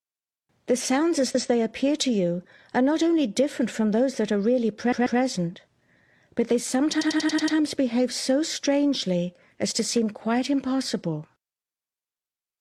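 At 1.30 to 1.45 s, 4.88 to 5.16 s and 6.97 to 7.53 s, repeated frames replay the same compressed block: 139 ms once, then twice, then a 93 ms block six times. Each repeat is an exact copy heard as a stutter, which sets it apart from a dropout gap.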